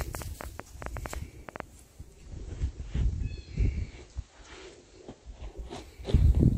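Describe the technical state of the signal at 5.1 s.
At 5.1 s the receiver is in digital radio blending to analogue (1.98–5.81 s): its FM fallback adds faint hiss about 35 dB below the signal and shifts the level about 1 dB.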